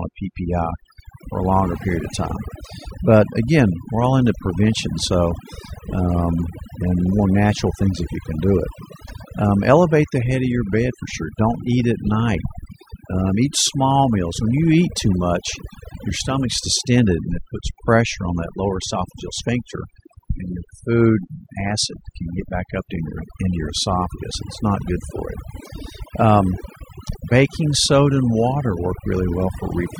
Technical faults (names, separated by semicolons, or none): overdone noise removal